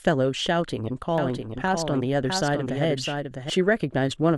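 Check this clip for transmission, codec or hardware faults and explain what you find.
There's a doubled audio track from 1.18 to 3.50 s: a second copy of the speech, a few dB quieter, trails the original by about 0.7 s, likely from a second capture path or a misaligned edit. It's dry and full-band, and cuts in and out abruptly.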